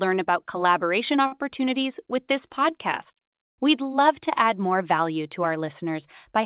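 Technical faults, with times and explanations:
1.26–1.34 s, short stall from a late packet: just after "about collaboration" a packet arrived late and the jitter buffer emptied, so the last sound is held about 56 ms with a slight buzz or dip, losing nothing.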